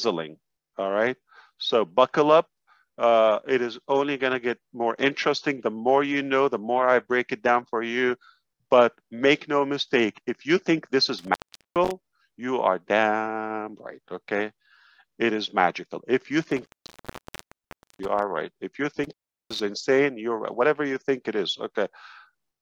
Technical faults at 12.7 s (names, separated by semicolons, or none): none